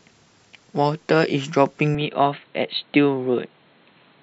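From 1.95 s to the end, the speech suddenly turns duller and boxier, about 5 dB quieter, with nothing above 4.2 kHz and a faint new background noise, with no gap at the change. This likely comes from the input switched to a poorer device.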